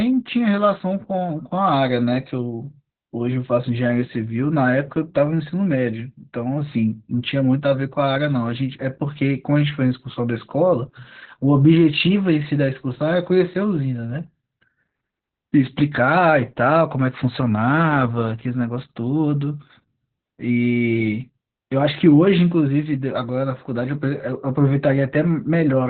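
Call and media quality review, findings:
Opus voice compression, whole clip. Speech muffled, hoarse, slightly robotic. Nothing above about 4.3 kHz. Narrowband SILK mode. The linear-prediction coder codes the excitation coarsely, and the band is cut to 4 kHz. Heavy damage fits a bitrate near 8 kbps. Probable component: encoder bitrate setting on the call path.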